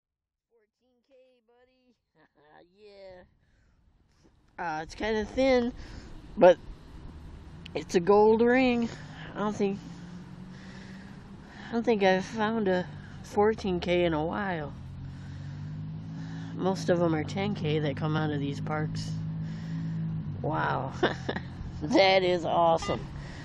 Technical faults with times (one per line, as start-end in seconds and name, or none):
8.93 compressed frames skipped
16.17 compressed frames skipped